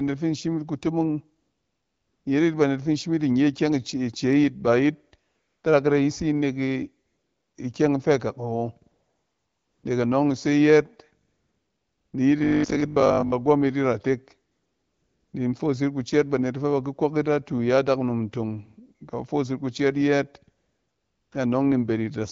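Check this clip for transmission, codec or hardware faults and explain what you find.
Two kinds of fault turn up: AMR comfort noise in the pauses, and one burst of robotic sound.

AMR comfort noise at 1.41–2.25, 5.29–5.63, 7.05–7.55, 8.91–9.83, 11.27–12.13, 14.51–15.33 and 20.57–21.31 s. The phone stopped sending speech frames, so the real background swaps for smooth synthetic hiss.

Robotic sound from repeated short buffers at 12.38–13.34 s. A hard 50 Hz buzz points to a 20 ms chunk being replayed, likely because new audio arrived too seldom, with most of that stretch repeated.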